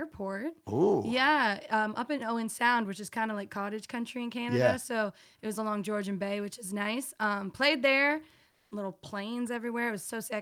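Comfort noise in place of the background appears from 8.51 to 8.71 s: for 200 ms the real background, already about 48 dB below the loudest parts, gives way to flat, featureless hiss about 4 dB different in level, likely synthetic fill from discontinuous transmission such as Opus DTX.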